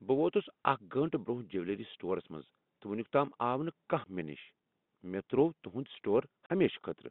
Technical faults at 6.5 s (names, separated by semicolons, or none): packet loss filled with silence